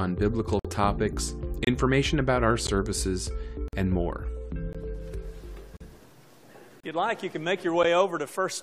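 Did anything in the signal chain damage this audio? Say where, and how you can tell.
Yes. At playback, a gap between stream segments leaves the timestamps not quite meeting, so the player pads silence. Hard-edged holes of 12 to 54 ms recur about every second: 0.59, 1.65, 2.67, 3.68, 4.73, 5.77, 6.80 and 7.83 s, matching 1-second segments. No audio is lost.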